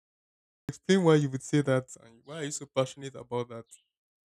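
The recording or stream began late on this speech clip, a cut-off start: the first 0.69 s is pure digital silence, and at 0.69 s the audio jumps in mid-sound with no natural attack or fade, just ahead of "why you would say".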